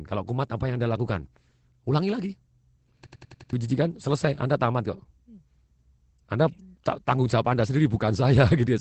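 Opus voice compression runs throughout. The low-rate SILK coding, which points to about 12 kbps, cuts everything above 8.6 kHz and leaves the speech plainly muffled, hoarse and slightly robotic.

A system hang loop runs from 3.07 to 3.53 s. A frozen system let the hardware replay one 93 ms block, fitting a 4096-sample buffer, five times. This produces a 10.8 Hz machine-gun stutter and loses about half a second of audio.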